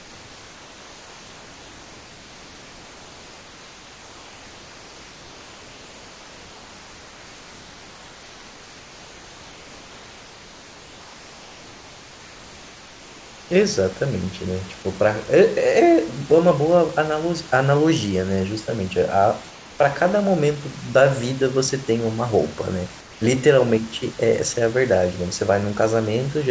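From 0 to 13.51 s, then at 19.51 to 19.79 s and 23.01 to 23.21 s, the room background turns flat, featureless and about 2 to 3 dB quieter: comfort noise in place of the background, likely from discontinuous transmission dropping pauses and the receiver synthesising filler noise.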